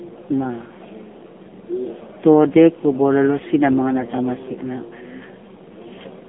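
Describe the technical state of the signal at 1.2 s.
AMR narrowband mobile codec damage is present at 1.2 s, as it is across the whole clip. The speech is squeezed into a 200 Hz to 3.5 kHz telephone band and rebuilt from a vocal-tract model with sparse pulses, giving a plainly buzzy, synthetic tone that fits a low 7.4 kbps mode.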